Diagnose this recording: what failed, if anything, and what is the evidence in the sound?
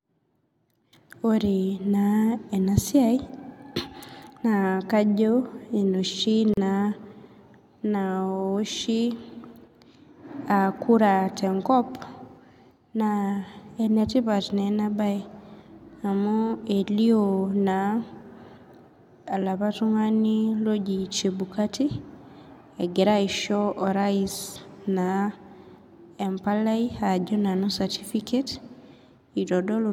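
The speech drops out for about 37 ms at 6.54 to 6.57 s, a gap at a join of encoded pieces. It's a codec-stage splice: separately encoded segments were butted together untrimmed, so encoder start delay and last-frame padding left silence with smeared edges before the speech resumes.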